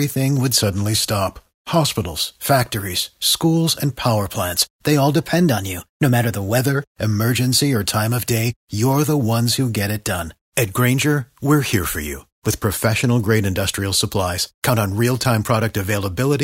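From 0.61 to 2.02 s, before "factories schools and power", the speech slows 6% and sags about a semitone. From 5.20 to 6.58 s, after "power plants they all", it speeds up 6% and rises about a semitone. That's a drift correction step, likely clock-sync software jumping the playback rate.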